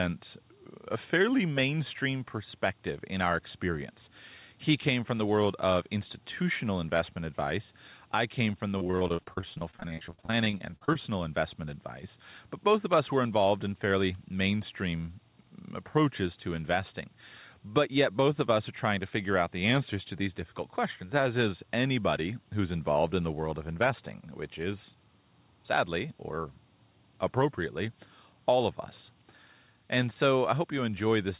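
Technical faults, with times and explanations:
Throughout: switching supply whistle. A thin high whistle sits between 7.9 and 8.2 kHz, roughly 20 dB below the speech, from a switching power supply running in an audible burst mode or beating with another.
8.78 to 10.96 s: repeated packet loss (robotic sound). Right after "I came from the", dozens of holes up to 49 ms are patched by repeating sound, giving choppy, robotic speech.
11.08 to 11.42 s: jitter buffer speed-up. To cut excess delay, about 40 ms of pitch periods are removed, so speech runs at 110% speed at unchanged pitch and sounds hurried.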